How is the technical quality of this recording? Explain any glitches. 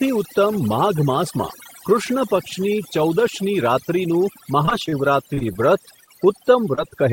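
The recording is speech with clearly degraded technical quality. One processing problem runs through the whole clip, and a cluster of network glitches falls in its last few seconds.

Overdone noise removal runs from start to finish. The background drops and breaks up into twinkling specks. A noise reduction stage was set too aggressively. It pulled individual frequency bands down or out whenever they came close to its noise estimate, and that took away the softer parts of the voice along with the noise.

Repeated packet loss (robotic sound) runs from 4.65 to 4.94 s. The speech turns choppy there, with pieces dropping out. Five separate gaps hit this stretch, the longest about 31 ms, and together they lose about 60 ms of real audio. Each hole was patched by extending the sound just before it. Because the next gap came soon after, 31% of the span is synthetic fill, which produces the mechanical quality.

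Short concealed packet loss occurs three times, at 5.34 to 5.39 s, 6.05 to 6.09 s and 6.75 to 6.79 s. Each one is a brief smear or wobble in the voice. About 20 ms of audio failed to arrive in time in each case. The receiver covered the hole by continuing the preceding sound, following its pitch where it was voiced, and then blended back into the real signal.

Short stalls from a late packet occur at 5.39 to 5.43 s, 5.53 to 5.57 s and 6.89 to 6.93 s. Each one holds a sound slightly too long, with a faint buzz or dip. A packet was late, so the jitter buffer ran dry, and the last sound was stretched by about 22, 23 and 18 ms respectively. Playback then resumed from the same point, so nothing is actually missing, only delayed.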